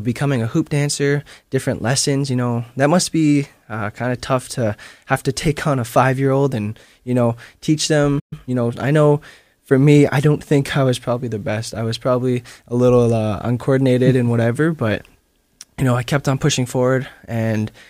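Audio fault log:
8.19–8.33 s, playback stall: the player most likely ran short of buffered data, or its output thread was held up, so nothing reached the output and the speech drops out mid-flow for about 120 ms. Because the break lands inside continuous speech rather than at a natural pause, it reads as a hard gap, not a hesitation. When data arrives again, the sound resumes from where it stopped instead of skipping ahead.
8.33–8.81 s, time-compressed catch-up: having fallen behind during the stall, the player works off its backlog by dropping short slices of audio and cross-fading across the joins, running at 1.25 times normal speed. Pitch is unchanged, so the speech sounds hurried rather than higher. The hurried pacing lasts roughly half a second, until the player is back in step and normal pacing returns.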